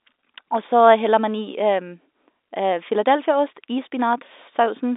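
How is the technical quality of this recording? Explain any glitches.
The technical quality holds up, with no glitches to explain.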